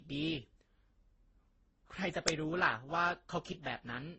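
Transcoding between lossy codecs runs through this whole speech clip. The band stops sharply at about 8.2 kHz, and the swirly, smeared low-bitrate texture sits alongside a separate layer of pre-echo and warbling. That pattern is most likely the result of several low-rate codecs in a row, one of them around 12 kbit/s followed by others near 28 and 32 kbit/s, ending in MP3. Each stage spends its few bits re-encoding the last one's damage, and the lowest cut-off in the chain sets the ceiling. An uninitialised buffer produces a sudden, loud click of digital noise at 2.28 s. It lasts only about 1.5 ms, which fits a 64-sample block played out before any audio was written into it, so leftover memory contents were heard as samples.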